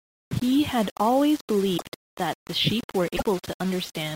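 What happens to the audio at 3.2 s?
Between 3.16 and 3.22 s the speech jumps ahead and the gap is filled by a brief chirp, burst of noise or short hole lasting about 60 ms. This is likely a broken MP3 bit reservoir. Frames went missing, and the frames that followed reached back for borrowed data that was no longer there, decoding someone else's bytes. The span covers only a couple of 24 ms frames.

Through this moment, as across the whole clip, the speech also carries a coarse, grainy edge that rises and falls with the voice. Quiet parts sound gritty, and the error sits only about 20 dB below the signal. This points to low bit depth without dither, likely samples rounded to around 5 bits. Because no dither was added, the rounding error tracks the signal and is heard as distortion rather than steady hiss.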